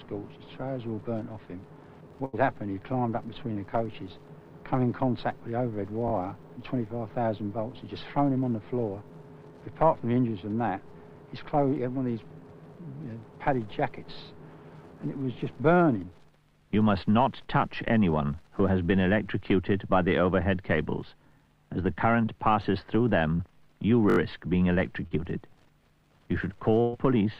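At 2.25 s a burst of packet loss removes about 80 ms of audio. The receiver extends the last sound for about 75 ms and fades it, giving a held, dimming tail before the audio resumes further on. At 3.53 s a short concealed packet loss fills a 20 ms hole with synthesised continuation, heard as a brief smear. At 6.08 s a repeated buffer sounds: a piece of roughly 20 ms, which fits a 20 ms playback buffer, plays twice more with hard joins, producing a short buzzy stutter. At 9.08 s the same fault recurs with one extra play, heard as a click. Further short concealed packet losses at 23.35 s and 25.07 s each cover about 40 ms, causing a brief wobble where a short sound can drop out. At 24.10 s a repeated buffer plays four extra times, a longer stutter of about 80 ms. At 26.81 s a second burst of packet loss covers about 120 ms with a fading extension.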